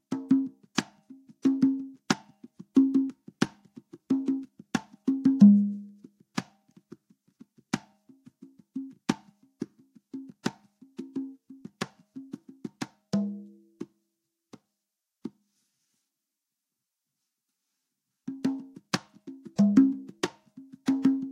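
Right at 0.77 s there's a bit of pre-echo, and it turns up again at 2.08 s and 18.92 s. Each time a sharp attack lands late in a codec block, and the quantisation noise meant for the loud hit gets smeared back over the quiet bit just before it: roughly 10 to 12 ms of hiss, about 12 to 15 dB above the floor. That fits a roughly 26 ms transform window with no switch to short blocks, so the transients come across soft and fuzzy.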